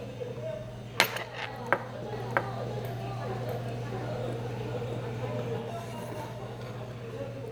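Everyday sound, and from 2.12 to 5.58 s there's a doubled audio track: an equally loud, dry copy trailing around 0.7 s behind, likely a second capture path running late.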